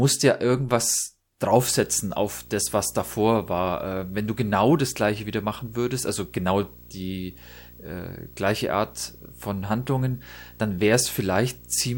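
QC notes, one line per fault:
1.51–11.98 s, video or display buzz after "ja irgendwas": a buzz at the 59.94 Hz field rate with hash above it and a 15.7 kHz line tone, sitting well below the speech, suggesting a screen or video cable coupling into the audio.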